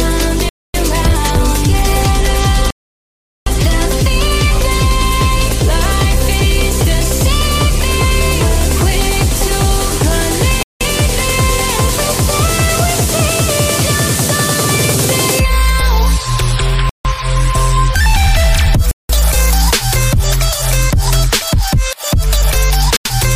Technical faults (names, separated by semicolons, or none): Bluetooth stall